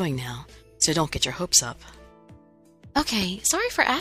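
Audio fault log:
1.16–1.19 s and 2.99–3.25 s, loud pop: a sudden voltage pulse, likely from a plug, switch, static or driver glitch, enters the signal, giving one sharp pop, then two in quick succession, standing a few decibels above the sound, which continues underneath.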